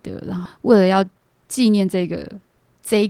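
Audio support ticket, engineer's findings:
Skip ahead at 0.45 s: jitter buffer overflowed or audio lost in transit while later packets were already queued. Around 0.7 s of speech discarded, no fill. Playback jumps forward, the two sides of the cut butted together with no audible gap.

Jitter buffer speed-up 0.71 to 2.64 s: buffer held excess audio, so the receiver trimmed short pitch-period chunks repeatedly, about a third of a second in total. Speech runs at 115% speed, same pitch, sounding hurried.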